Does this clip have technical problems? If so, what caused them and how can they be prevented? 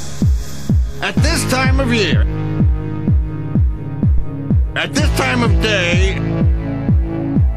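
Yes. A phantom power thump runs from 4.18 to 4.37 s, peaking at about −5 dBFS with a 43 ms decay: supply voltage switched on a live input, its step passing through the coupling capacitors. Mute the channel before switching phantom power.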